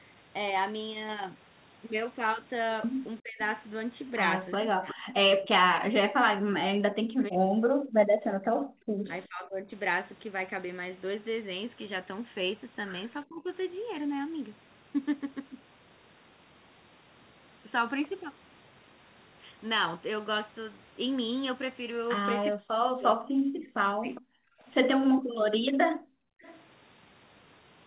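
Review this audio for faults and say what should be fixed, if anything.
The speech is suppressed in double talk three times: 3.2 to 9.73 s, 13.25 to 13.48 s and 22.51 to 24.46 s. The voice dips or breaks up in pieces. Across the first stretch, about 4 seconds are affected. The drops reach roughly 40 dB, and the short middle one about 20 dB. The likely cause is that both ends talked at once. The echo canceller could not tell this talker from its loudspeaker echo, so it turned everything down. Prevention: use a canceller with better double-talk detection, or a headset.

An echo leak appears twice. There is a brief scrap from 4.89 to 4.94 s, delayed about 361 ms. A longer stretch runs from 24.15 to 26.63 s, delayed about 409 ms. Both sit around 20 dB below the speech. A delayed copy of the voice returns, likely because the far end plays the call on a loudspeaker and its canceller did not remove everything its microphone caught. 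Prevention: improve the far end's echo cancellation or reduce its loudspeaker volume.

The background is gated by the echo canceller from 8.04 to 8.76 s and from 25.21 to 26.42 s. The room sound drops by about 40 dB, for roughly half a second and then about a second. It comes back when the canceller releases. While the loudspeaker played, the canceller clamped the microphone hard, taking the ambience with it. In this narrowband call, nothing is heard above 4 kHz. Prevention: use gentler suppression or add comfort noise so the gaps stay covered.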